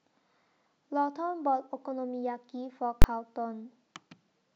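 At 3.02 to 3.04 s there's a nasty hit from invalid numbers at full scale: some calculation blew up into infinite or invalid values, which got pinned to the extreme limit for about 21 ms, which fits a 1024-sample block. It comes across as a single sharp bang.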